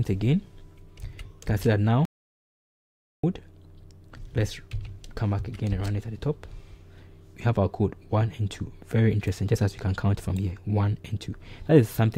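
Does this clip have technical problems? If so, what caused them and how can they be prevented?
Yes. An audio dropout to silence runs from 2.05 to 3.24 s, about 1.18 s of silence with no room tone, cutting in and out mid-flow; the input was likely lost while recording continued. Secure connections and monitor input levels during capture.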